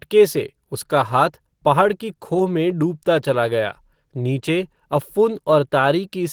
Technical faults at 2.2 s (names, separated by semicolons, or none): none